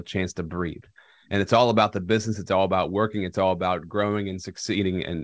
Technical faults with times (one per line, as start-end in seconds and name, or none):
none